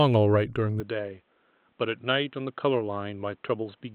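At 0.8 s the speech abruptly narrows, with nothing above 4 kHz from then to the end, and it turns dull and boxy, drops by around 5 dB, and gains a faint new background noise far beneath the speech. The input likely switched to a poorer device with no gap at the switch. A simple filter or codec bandwidth drop would cut the top alone; here tone, level and noise floor all change at once.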